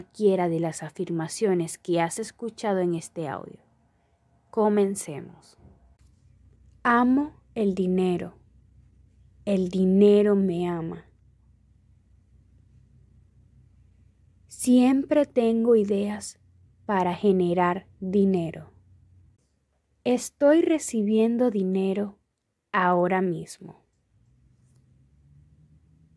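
Nothing technically wrong turns up anywhere in this audio, so there's no time or cause to point to.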